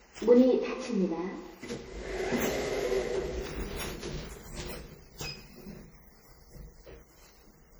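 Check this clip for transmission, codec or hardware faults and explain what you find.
There is one codec fault, present throughout the clip. The audio has likely suffered generation loss from being run through MP3 encoding about fifteen times, which fits a low bitrate around 64 kbit/s. Each pass requantised on a shifted frame grid, so the sound is swirly, smeared and hollow, with blurred attacks.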